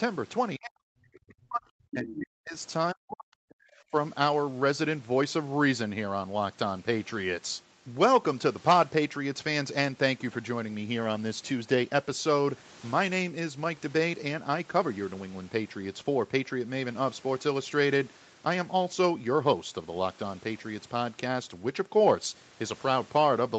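Speech suppressed in double talk hits this speech recording at 0.57–1.71 s, 1.93–2.57 s and 2.93–3.66 s, where the voice falls almost to silence, with a much shallower dip at 3.91–3.95 s. The likely cause is an echo canceller that, with both parties talking at once, could not tell the near talker from loudspeaker echo and attenuated everything. The other side's voice leaking through appears briefly at 2.09–2.14 s, a faint scrap well below the talker, inside the second suppressed stretch. It is likely residual echo: the far end, played on the talker's loudspeaker, was picked up by the microphone and not fully removed. Through the call path, nothing above 8 kHz is heard.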